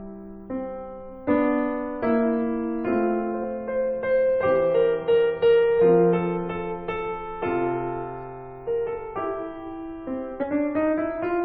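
A music clip with two brief glitches from damaged data in a compressed stream, at 3.43 s and 10.42 to 10.44 s, where the decoder misreads corrupted frames. Spectrograms show thin broadband vertical streaks.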